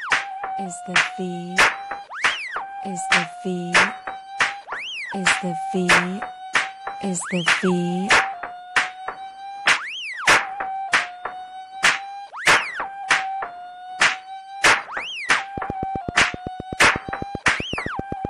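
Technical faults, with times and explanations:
0.56, 5.11, 9.75, 13.03 s: compressed frames skipped. Whole frames of 23.2 ms went unplayed, so the sound jumps ahead by one to three frames, leaving brief smeared blips.
15.58 to 18.26 s: train of clicks. Likely interference or a faulty connection injecting pulses at 7.86 per second, regular ticking around 10 dB above the sound.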